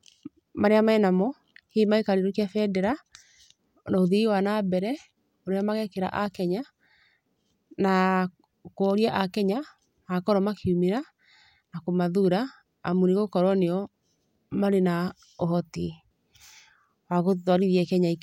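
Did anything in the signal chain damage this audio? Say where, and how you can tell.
No, nothing in the chain from capture through playback has left any audible damage on this speech recording.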